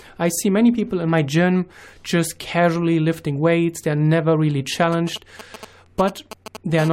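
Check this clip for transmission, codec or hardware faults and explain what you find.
Three faults show up in the speech, all in the last two seconds.

GSM signalling bursts run from 4.92 to 6.80 s, starting right after "weights they're never really". A nearby 2G handset is exchanging short control bursts with the network, and the audio circuitry rectifies the RF pulses. The result is a galloping dit-dit-dit of brief 217 Hz buzz fragments, sitting roughly 15 dB below the speech.

Compressed frames are skipped at 5.85 s. One compressed frame, lasting 21.3 ms, never reached the output, either because it was missing or because the decoder rejected it as corrupt. Playback jumps ahead by about 20 ms, leaving an audible join where the audio resumes.

GSM phone buzz follows from 6.80 to 6.89 s, when the handset switches to continuous call transmission. Its 217 Hz burst rate is rectified into a hard, raspy buzz rich in harmonics and unrelated to the speech, at about 13 dB below the signal.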